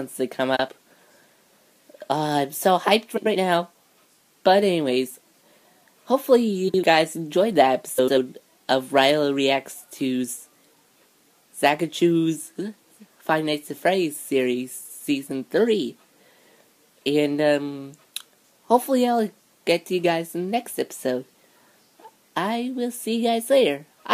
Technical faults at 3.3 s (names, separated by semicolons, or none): frames out of order